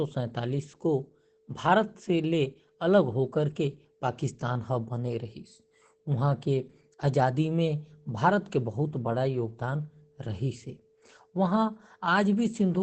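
From start to finish the speech is muffled and hoarse, with heavy codec damage and nothing above 8.4 kHz. This is likely Opus compression running in its SILK speech mode, which fits a very low bitrate near 12 kbps that forces a wideband limit.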